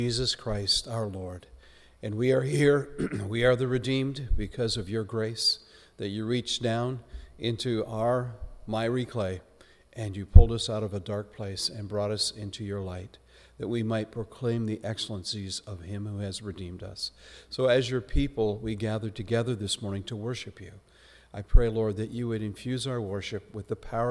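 No technical faults are audible anywhere in the recording.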